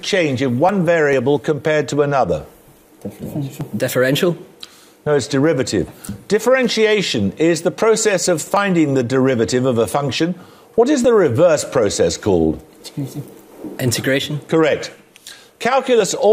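At 1.13, 3.61, 6.09, 8.57, 11.05, 13.52 and 16.0 s the audio skips forward with no gap. This is likely audio missing between chunks: around 20 ms is lost at each 2.5 s chunk boundary, and the two sides are butted together.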